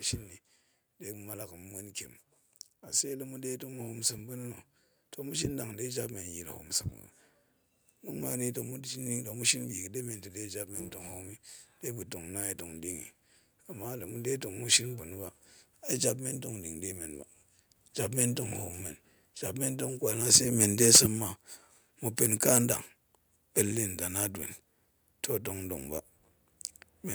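A speech recording with microphone overload from 20.33 to 21.0 s, where peaks run about 13 dB past the converter's limit and a few percent of samples are flattened, and again briefly at 22.55–22.58 s, about 4 dB over. The harsh crackle on loud syllables is likely the input gain set too high. Unlike a level drop, it distorts without changing loudness. At 20.97 s the microphone volume steps down by 2 dB. Voice and background fall together, likely the call software reacting to the clipping just before.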